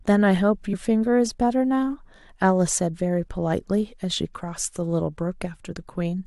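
At 5.71 to 5.73 s, near the end of the speech, compressed frames are skipped: a short run of encoded frames never reaches the output, either lost from the file or rejected by the decoder as corrupt. Playback jumps forward by about 20 ms.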